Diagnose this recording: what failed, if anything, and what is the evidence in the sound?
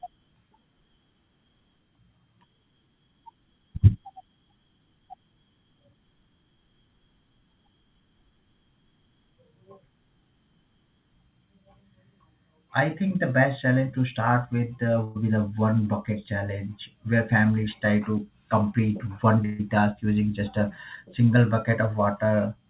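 Burst of packet loss, network side, at 15.04 s and 19.45 s: the last sound's stretched and faded, then audio skips ahead, roughly 120 and 140 ms gone.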